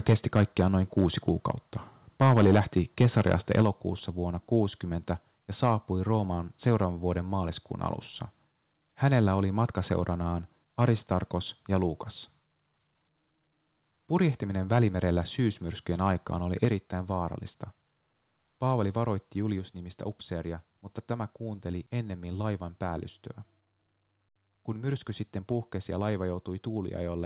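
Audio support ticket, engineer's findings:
Mic input gain set too high, likely driving the converter past full scale. Peaks flattened, harsh crackling edge on the loudest speech. Microphone overload at 0.08–0.61 s (about 7 dB over, a few percent of samples clipped), 0.97–1.29 s (about 2 dB over, a small share clipped), 2.21–3.62 s (about 4 dB over, a few percent clipped). Clipped peaks sit inside a band that stops at 4 kHz, as the narrowband call path shapes it.

Automatic gain control, likely reacting to the hot input, cut the device input volume in single steps. Voice and background drop together, abruptly. Microphone volume stepped down at 0.13 s (about 3 dB), inside the first overload; 3.62 s (about 4 dB), exactly as the third overload ends; 16.65 s (about 5 dB), just after "välimerellä syysmyrskyjen aikaan oli"; 19.59 s (about 2 dB), just before "upseeria mutta tämä kuunteli".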